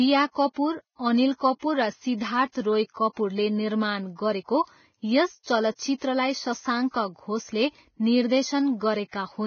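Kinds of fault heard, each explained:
Vorbis compression: The speech was likely squeezed through a low-bitrate Vorbis encoder, which fits a rate of roughly 17 kbps. The encoder keeps only a smooth outline of the spectrum plus a coarse residue, so it discards everything above about 6.6 kHz and quantises the remaining treble so roughly that fine detail turns into noise. The damage is heavy: the voice sounds dull at the top, grainy and hissy, with roughened tone and softened consonant attacks.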